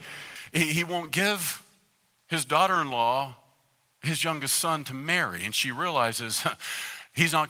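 Pre-emphasis left on, from 0.36 s to the end of this speech clip, is the fault. The treble lift applied before transmission, which fits a J.17 curve, was never undone by the matching de-emphasis, so the highs stay raised by about 11 dB at 10 kHz relative to 1 kHz. The voice sounds thin, bright and edgy, and its sibilants hiss. The light Opus voice compression underneath keeps its full band, so nothing tames that exaggerated top end.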